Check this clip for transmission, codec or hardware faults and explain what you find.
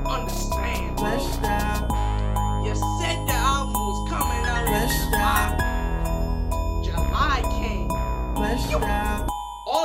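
There's one fault, and it's only in the middle stretch. From 3.00 to 5.45 s you've got pre-emphasis left on. The treble boost applied before transmission never got its matching de-emphasis, and the shape fits the standard 50 µs FM curve. So the top end sits about 11 dB hotter at 10 kHz than at 1 kHz. For those couple of seconds the sound turns thin, glassy and hissy-bright, then snaps back.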